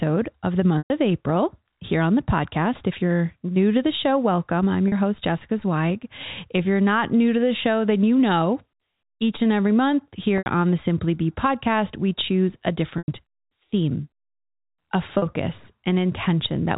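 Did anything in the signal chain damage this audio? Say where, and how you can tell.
Yes, the damage is on the network side: packet loss with pitch repetition, five times. Dropouts start at 0.78 s after "of the" (0.12 s), 4.88 s after "the show welcome I'm" (0.04 s), 10.38 s (0.08 s), 12.98 s after "podcast we choose a" (0.1 s) and 15.18 s (0.04 s). The short gaps hold a buzzy repeated pitch period. The longer ones fade toward silence before the speech cross-fades back. The gap lengths fit 20 ms packets. The telephone-band G.711 coding underneath is carrying the audio as intended.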